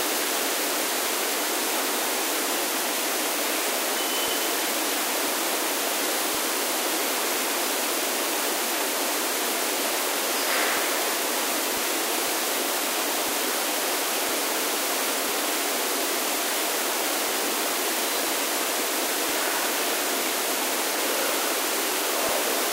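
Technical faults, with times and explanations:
0.21–22.29 s, periodic USB or driver dropouts: A small regular tick sounds about once every second, roughly thirty in all, and is heard only where there is signal. Each time, about a millisecond of audio is skipped rather than filled with silence, so the waveform jumps and the splice clicks. The steady one-second rhythm points to a background task that stalls the USB bus or audio driver on a fixed schedule.
0.39, 3.68, 6.02, 8.12 and 11.81 s, damaged data in a compressed stream: A short glitch cuts into the sound at each of these points. Corrupted bytes in the compressed stream make the decoder misread those frames and lose sync. It searches ahead for the next valid frame header.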